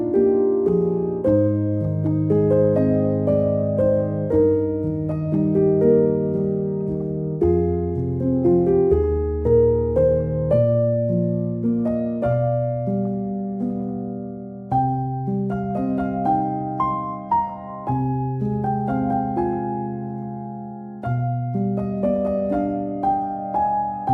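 No technical faults can be heard anywhere in this audio. There is nothing in it to mark at any point in time.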